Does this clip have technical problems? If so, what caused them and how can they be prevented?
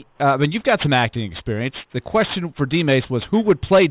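Yes. Aliasing runs through the whole clip: content above 4 kHz folds back below that edge as gritty, unrelated tones, roughly 20 dB under the signal, which points to downsampling from 48 kHz to 8 kHz without an anti-aliasing filter. Prevent it by low-pass filtering below the new Nyquist frequency before reducing the sample rate.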